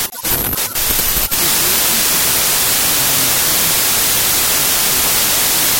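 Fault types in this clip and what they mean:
Wrong sample width, throughout: the data appear to have been written as 32-bit integers and read back as packed 24-bit ones, so most three-byte groups the reader takes straddle parts of two real samples. Most values come out as mismatched bytes, giving a loud noise bed, while only some windows keep the top bits of the true signal, leaving it buried underneath. Four bytes read as three also stretches everything to 0.75 speed, with pitch lowered by the same ratio.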